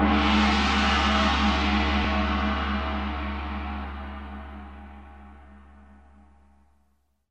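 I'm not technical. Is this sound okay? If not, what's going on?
No. There are compressed frames skipped at 2.04 s and 3.84 s. Small chunks of audio were lost, so the sound jumps forward about 70 ms, then about 150 ms. Each jump is a short smeared blip rather than a sharp click.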